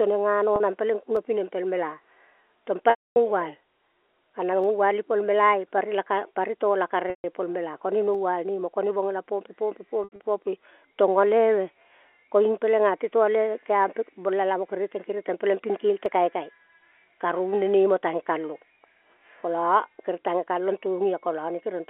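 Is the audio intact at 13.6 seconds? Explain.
Yes, the audio is intact at 13.6 s, where the speech carries only the narrow 300 Hz to 3.4 kHz band of ordinary G.711 telephone coding.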